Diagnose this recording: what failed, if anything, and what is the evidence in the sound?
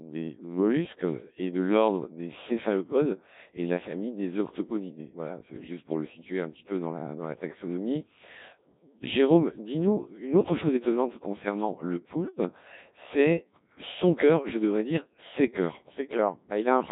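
The failure is at the codec stage: the whole recording has passed through a Codec 2 vocoder, and the damage is heavy throughout. The speech sounds robotic and buzzy from start to finish. The decoder rebuilds it from sine waves driven only by pitch, voicing, energy and a coarse spectral envelope, so the original waveform never reaches the output. The degree of smearing points to one of the lowest modes, around 1.3 kbit/s.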